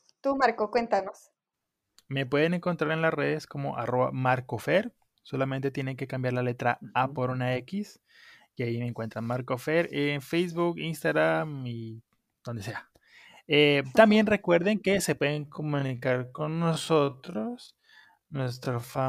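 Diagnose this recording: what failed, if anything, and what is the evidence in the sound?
From 15.26 s to the end the speech slows to about half speed with unchanged pitch, dragging: a time-stretched section, likely software repeating short chunks to fill length.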